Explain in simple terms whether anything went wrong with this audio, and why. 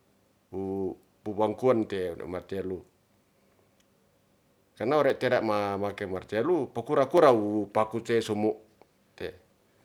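Dropped samples at 5.1 s and 7.18 s, just after "martelu po kura": two sharp clicks, likely from a tiny slice of the speech going missing.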